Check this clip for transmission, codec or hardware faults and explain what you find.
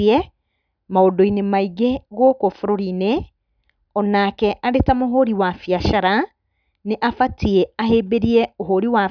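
No transmission, codec or hardware faults.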